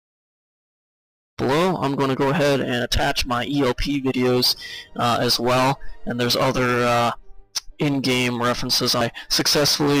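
The sound fades in smoothly over roughly the first one and a half seconds, with no hard edge. At 9.01 s there is damaged data in the compressed stream. Data in one part of the encoded file is corrupted, so the decoder misreads the frame there, loses sync and hunts for the next valid frame header. The result is a very brief chirp or blip, only a few milliseconds long.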